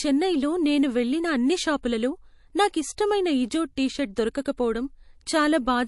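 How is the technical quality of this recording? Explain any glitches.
The recording is clearly degraded by lossy coding across the whole clip. MP3 compression, throughout: the sound has nothing above 11.3 kHz and a watery, swirling texture with chirpy s sounds, likely from an MP3 encoder short of bits, which fits a bitrate around 48 kbps. It cuts the treble and lets weak frequency components flicker between frames.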